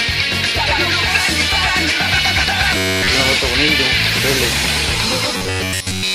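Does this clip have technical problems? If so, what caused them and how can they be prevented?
Yes. Robotic sound from repeated short buffers at 2.77–3.09 s and 5.37–6.15 s: the sound becomes a rigid 94 Hz buzz, likely from a roughly 10.7 ms buffer looping while new audio arrives too late. Larger playback buffers and a less heavily loaded audio thread would prevent it.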